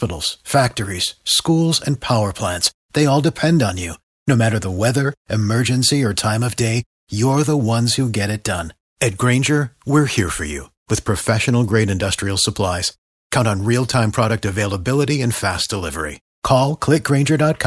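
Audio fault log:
No faults detected in this speech recording.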